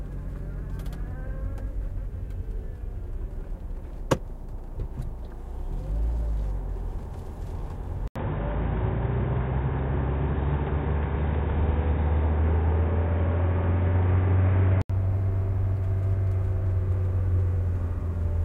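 At 8.08 s an 80 ms gap appears, then until 14.90 s the sound turns dull, with nothing above 3.8 kHz and a new background noise roughly 30 dB down at a similar level. This is likely an input switched to a poorer device. A spectrogram shows a hard ceiling.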